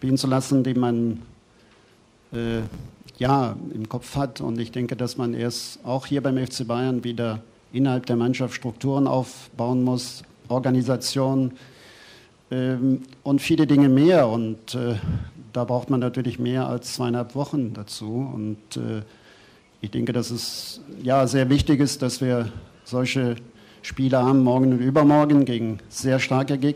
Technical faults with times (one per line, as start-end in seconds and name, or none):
2.35-3.27 filter restarted on every block